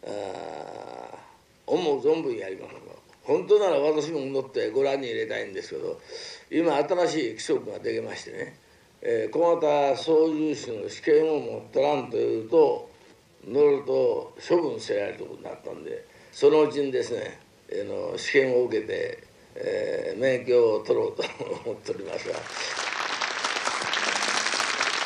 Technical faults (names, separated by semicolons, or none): time-stretched section